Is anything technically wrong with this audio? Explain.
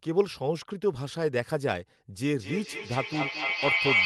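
Yes. From 2.39 s to the end, a feedback howl rises to about 5 dB above the speech: a piercing tone around 2 kHz that pulses roughly every fifth of a second. Two devices in the same room loop sound back to each other, gaining level on each trip until the tone takes over.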